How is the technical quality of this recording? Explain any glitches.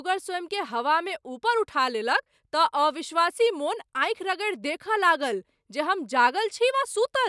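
The recording has no technical glitches to explain, as the speech signal stays continuous and unaltered throughout.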